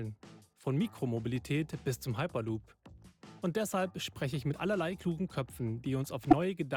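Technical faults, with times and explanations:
6.31–6.33 s, corrupt frame decoded: a brief glitch near the very end, peaking around -10 dBFS. A couple of compressed frames arrived with damaged bits and were decoded anyway, so misread gains and codes scattered energy across wrong frequencies.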